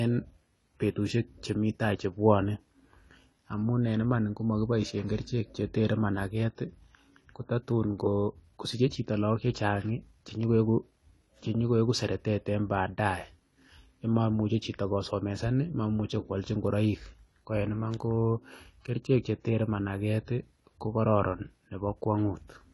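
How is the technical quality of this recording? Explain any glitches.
The recording has one fault, running for the whole clip: AAC compression at a low bitrate. The speech sounds dull and band-limited, with nothing above 11.5 kHz and plainly audible coding damage. The likely cause is AAC-LC encoding, whose level of damage fits a bitrate of about 32 kbps. At that rate the encoder lacks the bits to code the full spectrum, so it drops the top octave and quantises the remaining bands coarsely, leaving the speech dull and processed.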